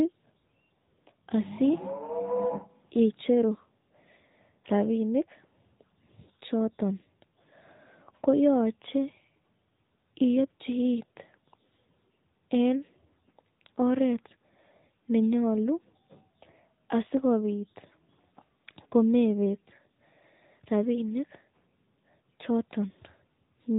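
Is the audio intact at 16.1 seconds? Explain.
No. At 16.1 seconds the speech carries the AMR narrowband mobile codec damage that runs through the whole clip. The codec samples at 8 kHz and rebuilds the voice from a vocal-tract model excited by a few pulses per 5 ms subframe, so nothing above about 3.8 kHz survives. The sound is muffled and telephone-like, with a plainly audible buzzy, synthetic edge that fits a mid-range mode around 10.2 kbps.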